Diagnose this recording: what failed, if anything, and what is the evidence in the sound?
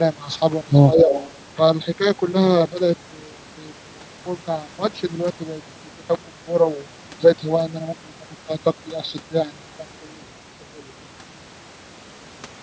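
Call processing, specifically the echo canceller, likely mishandled a stretch of double talk, with both ends active at once. Unable to separate the near talker from the loudspeaker echo, it pulled the gain down on everything. Between 0.93 and 1.12 s the speech dips by a few decibels, at most about 5 dB, for roughly 150 ms in total. This is speech suppressed in double talk.

An echo canceller then let residual echo through. Starting at 1.1 s and lasting until 1.33 s, a delayed copy of the speech sits about 10 dB under the direct sound, trailing it by 205 ms. This is the signature of echo leak, likely from a loudspeaker-based endpoint whose canceller did not remove all of what its microphone heard, so part of it was returned. The echo is heard as a brief, faint repeat within the call's roughly 8 kHz bandwidth.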